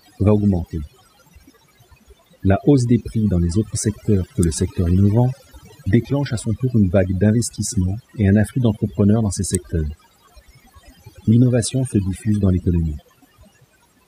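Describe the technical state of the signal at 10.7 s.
At 10.7 s the speech is affected by overdone noise removal, which runs through the whole clip. A noise reducer was pushed too hard. Any frequency band sitting close to its noise estimate gets pulled far down or switched off. Quieter parts of the voice fall below that line and vanish with the noise. The pauses drop to near silence, dotted with twinkling specks.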